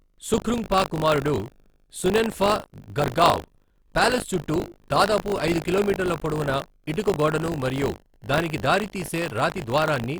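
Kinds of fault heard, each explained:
Buffer tearing: the playback side and the writing side of the ring buffer have drifted, so each period gets a small slice, about a twentieth, of audio from roughly 40 ms earlier. Those hard splices give the speech a steady robotic rattle at 50 Hz the whole way through.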